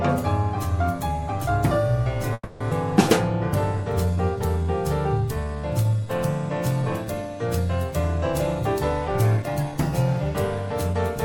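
The audio has four kinds of network playback fault, all within the first ten seconds.

From 2.33 to 2.62 s there is a call audio freeze. The last sound carries on as a fading buzz for about 270 ms, and the final 30 ms fall silent. Then the audio resumes where it stopped. Nothing is lost, but the playback is pushed 270 ms later. The likely cause is delayed packets that left the jitter buffer empty.

Just after, at 2.70 to 2.73 s, comes a skip ahead. Roughly a fifth of a second of audio is gone. The two sides are joined with only a 10 ms bridge. This fits the receiver dropping audio to shed the delay it had just built up. So the jump takes back most of the lag the freeze added.

A jitter buffer slow-down runs from 4.06 to 6.06 s. Playback drops to 92 percent speed at unchanged pitch. Sounds are drawn out, and 165 ms of repeated material is added. The receiver is copying single pitch periods to rebuild its reserve. 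A second, milder slow-down follows from 6.82 to 7.28 s. It runs at 94 percent and adds 37 ms.

From 9.08 to 9.75 s there is a jitter buffer speed-up. The audio runs at 111 percent speed with the pitch kept. It sounds hurried. About 70 ms is cut out in short pitch-period pieces. This is how the receiver trims excess buffered delay.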